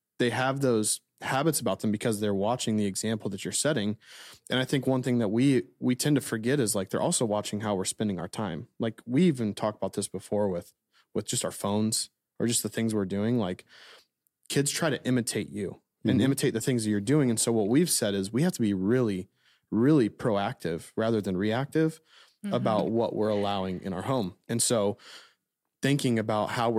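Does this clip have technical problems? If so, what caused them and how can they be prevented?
No, no technical faults detected.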